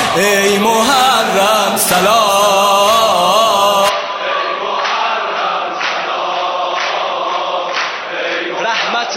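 At 3.89 s the sound abruptly turns duller and a little quieter, with no gap at the change. Everything above 6 kHz is gone from there to the end, and a faint new background noise sits well below the signal. This points most likely to the input switched to a poorer device.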